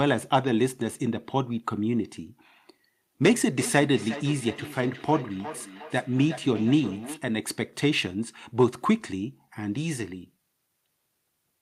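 From 3.51 to 7.26 s, the speech returns as a thin, ringing repeat roughly every 0.4 s, peaking about 13 dB below the direct voice. This is feedback echo between two devices: a nearby device plays the call back into this microphone, where echo cancellation cannot remove it.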